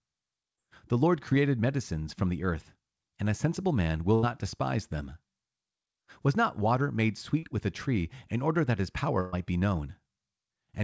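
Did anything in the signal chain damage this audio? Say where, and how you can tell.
Yes. Short concealed packet loss on the network path. Brief smears at 0.56, 1.29 and 7.39 s, the last after "not water made". The decoder stretched the previous sound over 10 to 40 ms gaps.

Burst of packet loss, also network. At 4.15 to 4.25 s, between "and a sensible man" and "despise them", sound holds and fades. Again at 9.21 to 9.34 s, after "in order that his". About 80 and 120 ms went missing.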